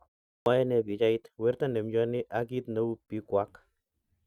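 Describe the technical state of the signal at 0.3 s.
The output device had dropped into sleep during the 0.3 s pause and needed time to wake. That produced a clipped start after a pause: from 0.30 to 0.46 s, about 160 ms of speech is swallowed, so the sound begins abruptly without its opening.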